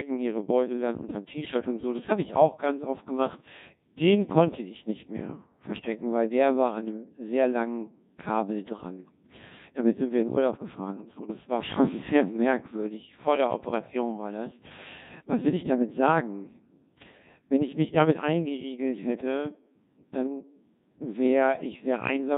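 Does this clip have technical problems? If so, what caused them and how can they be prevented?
Yes. The whole clip carries Codec 2 vocoder damage: the speech is rebuilt from sine waves using only pitch, voicing, energy and a coarse spectral envelope, so it sounds heavily robotic and buzzy, which fits a 1.6 kbit/s mode. Unlike the swirly, warbling artefacts of an ordinary low-bitrate codec, the original waveform is gone. To prevent it, record or transmit through a waveform codec at a higher bitrate instead of Codec 2.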